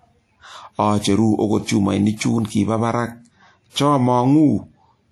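Speech carrying plainly audible WMA compression damage for its whole length: a ringing, washy smear around consonants and a hiss that rises and falls with the voice. That is likely long-block transform quantisation spreading noise over tens of milliseconds, consistent with roughly 48 kbps.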